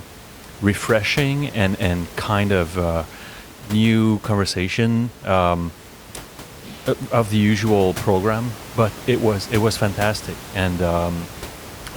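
No technical fault can be heard in the speech, and the only background is the room's own noise sitting about 17 dB below the voice.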